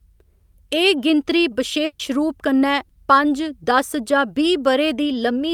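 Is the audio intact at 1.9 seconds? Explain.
No. From about 1.85 to 2.01 s there is a burst of packet loss: roughly 140 ms of consecutive packets never arrived in time, so the receiver stretched the last sound and faded it out, leaving a held buzz or dimming hiss, then resumed at "रूप कन्नै पंज दस" with that stretch gone. A spectrogram shows frozen, repeated harmonics decaying in level, then an abrupt jump; the waveform shows a uniform, shrinking pattern before a discontinuity.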